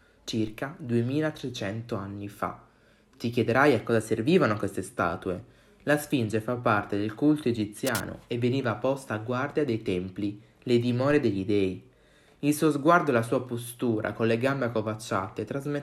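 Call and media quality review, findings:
DC step at 0.47 s and again at 11.11 s: short low thump each time, sound carries on unaffected. Zero line jumps by about -35 dBFS, then drifts back, which fits a high-pass around 5 Hz pulling it down. Probably converter recalibration or an offset input switching in.

Cable scratch noise, 7.85 to 8.11 s: rough scratchy burst sitting fairly loud over the sound, not far under it. Likely a worn cable, connector or pot being moved, contact resistance jumping around and throwing in uneven noise.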